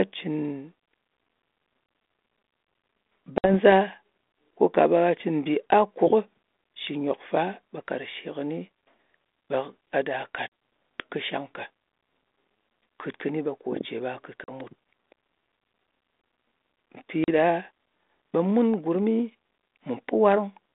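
Abrupt silent holes at 3.38, 10.48 (just before "kɨ shang ka"), 14.44 and 17.24 s, with the speech returning briefly slightly distorted. This is packet loss on an ADPCM call: 60 ms, then 40 ms, of audio dropped, knocking the decoder's predictor out of step until it settles.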